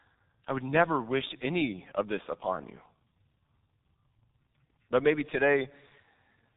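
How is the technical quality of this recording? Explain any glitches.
Technical quality is poor, with heavy codec damage from start to finish. The G.723.1 codec is at work throughout. It codes speech in coarse 30 ms frames, and its slow-updating voice model smears rapid changes. The sound points to a low-rate stream near 6.3 kbit/s. Nothing survives above 3.8 kHz. The speech sounds muffled and hoarse, and consonants blur together.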